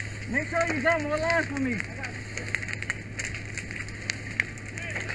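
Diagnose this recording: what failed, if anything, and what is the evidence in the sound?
The fault is a resampler restarted on every block, at the sample-rate conversion stage in the driver or buffer path. A faint tick recurs every 50 ms throughout the clip, giving a 20 Hz buzz that follows the signal and stops when it stops. Each block was converted in isolation, so the filter lacked the neighbouring samples at every block edge and left a small error there. The pattern fits a halving of rate, such as 48 kHz to 24 kHz.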